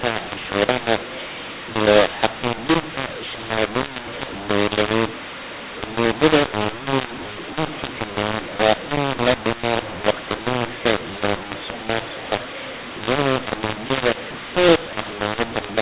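Speech over a telephone channel, and for its whole length it sounds harsh and grainy, with levels jumping unnaturally and the pauses filled with a hiss where there should be near silence. This is a mu-law and A-law mix-up: the audio was encoded with G.711 mu-law but decoded as A-law, so each 8-bit code maps to the wrong level. Some samples come out too loud, others too quiet, and the faintest ones are pushed well above silence.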